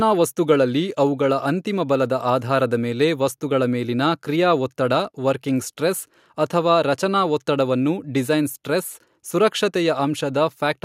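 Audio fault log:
No faults heard in this speech recording.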